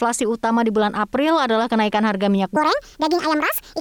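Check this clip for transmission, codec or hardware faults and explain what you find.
One fault is present. After "adalah kenaikan harga minyak", from 2.56 to 3.81 s, the speech jumps high and hurried. This section at the wrong speed runs 1.61 times fast, about seven semitones up, likely from playback against the wrong clock.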